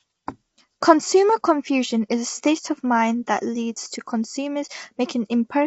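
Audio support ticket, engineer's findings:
Rough, grainy speech throughout, with noise filling the gaps between harmonics. Top band empty above about 7.7 kHz. Likely cause: low-delay AAC compression (AAC-ELD), as in video-call paths. Low bitrate starves bits, letting quantization noise fill between harmonics. Damage plainly audible, consistent with roughly 24 kbps.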